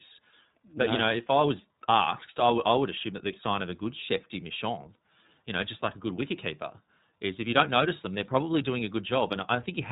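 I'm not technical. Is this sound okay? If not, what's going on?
No. The speech went through the iLBC codec, a phone-call compressor that handles the sound in 30 ms chunks and throws away everything above 4 kHz. Throughout the clip, the voice sounds muffled, slightly rough and a bit synthetic.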